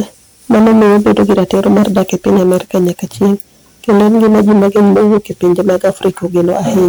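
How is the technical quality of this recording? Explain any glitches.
The technical quality is poor. Hard clipping runs through the whole recording. The speech was driven about 14 dB past what the recording chain could pass. Every peak above that ceiling was sliced flat. Roughly a sixth of the samples sit at the limit. Those squared-off tops create strong harmonics high in the spectrum. The result is a harsh, buzzing fuzz on every loud syllable. It is not an occasional crackle. It stays constant from start to finish.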